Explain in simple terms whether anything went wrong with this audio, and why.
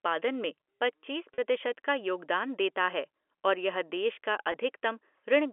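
Two brief held, buzzy blips, at 1.34–1.38 s after "में पच्चीस" and at 4.52 s after "और यह देश का", come from packet loss with pitch repetition. Chunks of sound went missing, and the receiver filled each gap by repeating the last pitch cycle.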